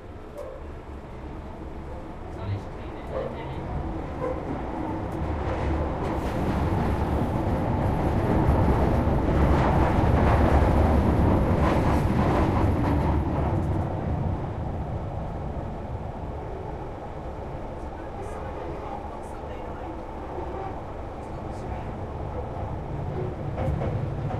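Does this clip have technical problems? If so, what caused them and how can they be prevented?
No technical faults are audible.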